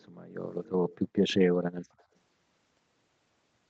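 Echo leak at 0.00–0.07, 0.52–0.70, 0.89–1.34 and 1.98–2.04 s: a faint copy of the speech returns about 287 ms late, clearest and strongest in the longest stretch, likely from a far-end loudspeaker whose echo canceller let some residue through.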